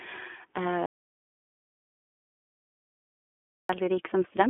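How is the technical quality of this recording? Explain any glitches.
The technical quality is poor: the speech is narrowband and audibly coded throughout, and most of the recording is a dead gap.

iLBC codec, throughout: the speech sounds like a telephone line, with nothing above 3.8 kHz and a band of roughly 250 Hz to 3.4 kHz. Each 20 ms frame is coded on its own, which suits iLBC at about 15 kbps, and gives plainly audible rough, synthetic colouring.

Audio dropout to silence, from 0.86 s to 3.69 s: the speech cuts off mid-flow and returns about 2.8 s later. The gap is silent, with no room tone. This likely means the input was lost while the recorder kept writing silence, so that stretch of speech is gone.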